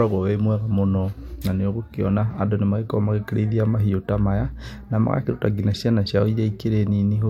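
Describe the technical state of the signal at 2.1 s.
At 2.1 s the speech signal is intact, with no dropout, clipping, glitch or other fault present at that point.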